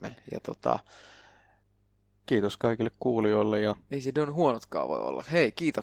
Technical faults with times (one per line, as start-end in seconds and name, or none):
0.00-5.82 Opus voice compression